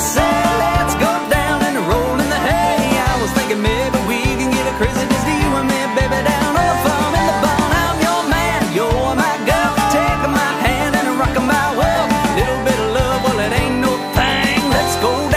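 Near the end the audio picks up a feedback whistle: from about 13.06 s right through to the end at 15.36 s there's a thin, steady tone at 4 kHz sitting roughly 15 dB under the main sound, swelling and fading slowly in level without ever building up. That's most likely a speaker-to-mic loop parked just at the edge of feedback, so the one frequency keeps ringing on its own without tipping over into a full howl.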